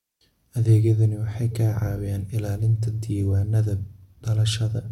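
No technical faults can be heard anywhere in this speech recording.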